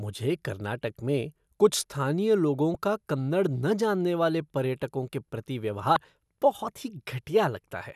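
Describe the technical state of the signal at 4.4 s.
The speech signal at 4.4 s is intact, with no audible fault at that moment.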